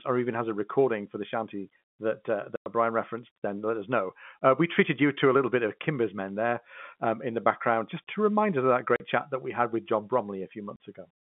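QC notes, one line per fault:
2.56–2.66 s, packet loss filled with silence: a 100 ms hole between "the shanty that uh" and "referenced then let us". The missing stretch is replaced by dead silence, so the sound stops hard and restarts abruptly at both edges. The length suggests five lost packets of 20 ms each.
8.96–9.00 s, packet loss filled with silence: a 40 ms gap between "remind us of that" and "chat that we had". It has the same hard edges and fits two lost 20 ms packets.
10.76–10.79 s, packet loss filled with silence: a short dropout of about two packets with the same abrupt cut and restart. Around all three gaps the speech keeps the narrow 200–3500 Hz telephone band of G.711 coding.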